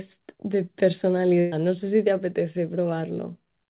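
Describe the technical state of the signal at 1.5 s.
At 1.5 s there is a burst of packet loss, running from 1.40 to 1.54 s. About 120 ms of the stream never arrived in time, so the receiver filled roughly 118 ms of the gap by extending the last received sound and fading it down, leaving no silence. The result is a held, dimming buzz or hiss in place of the speech, which then resumes further on with that stretch missing, all within the telephone-band G.711 sound that stops at 4 kHz.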